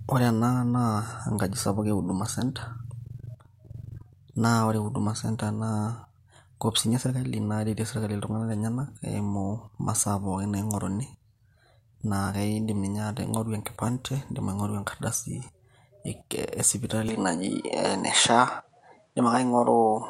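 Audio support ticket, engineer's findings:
Speech dulls abruptly at 17.09 s and stays so to end. Top end cut above 10.5 kHz, slight level shift (a few dB), faint new noise floor far below signal. No gap at transition. Likely an input switch to a poorer device: different mic or headset path, narrower bandwidth, own tone and noise.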